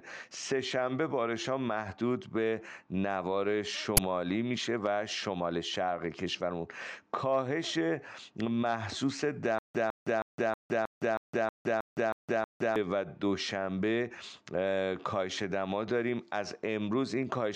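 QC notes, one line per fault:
3.97 s, uninitialised buffer: a sudden crack of about 12 ms of digital noise rather than sound. A buffer was sent to output before any audio was written into it, so stale memory played as samples, which fits a 512-sample buffer.
9.58 to 12.76 s, stutter with silent gaps: a 154 ms fragment repeats ten times, every 317 ms, with 164 ms of digital silence between repeats. The likely cause is a stalled player or stream replaying its last fragment at each retry, then running empty, so the audio for that span is lost.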